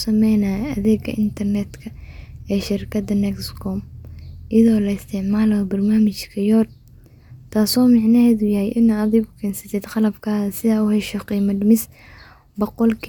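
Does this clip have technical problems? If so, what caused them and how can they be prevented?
No, there are no technical problems to report here.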